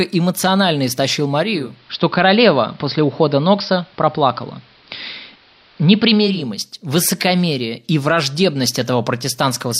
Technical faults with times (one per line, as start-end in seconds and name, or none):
1.50-6.50 digital radio blending to analogue